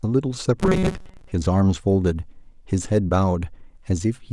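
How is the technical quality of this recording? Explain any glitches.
The recording has one clear glitch. From 0.61 to 1.32 s the speech collapses into a rigid, metallic buzz pitched at 188 Hz, still loosely tracking the syllables. This is robotic sound from repeated short buffers, most likely caused by audio arriving too slowly, so the playback side loops a fragment of roughly 5.3 ms in place of the missing audio. Most of that stretch is repeated material rather than real speech, and the loop rate imposes the fixed 188 Hz tone.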